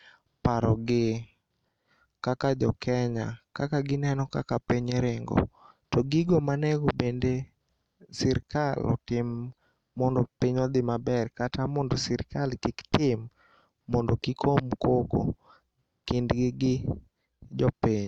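Nothing in the speech stood out as a technical fault on listening.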